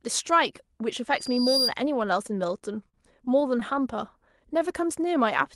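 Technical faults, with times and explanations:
1.16–1.75 s, loudspeaker feedback squeal: a 4.8 kHz tone swells over roughly 0.4 s to about 5 dB above the speech, as the mic-to-speaker loop exceeds unity gain.
2.27–3.63 s, repeated stalls (stutter): eight brief holds, longest 43 ms, where the receiver stretched the last sound while late packets arrived, so the speech drags and stutters.
4.53–5.23 s, jitter buffer slow-down: repeated pitch periods add 43 ms to rebuild the buffer reserve, so speech plays at 94% speed with pitch unchanged and sounds drawn out.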